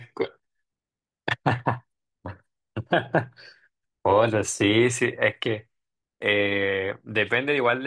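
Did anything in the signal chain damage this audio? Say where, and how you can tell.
No, nothing in the signal chain audibly damaged this speech recording. None of the stages, from wiring and conversion through to storage and playback, has left a mark that can be heard.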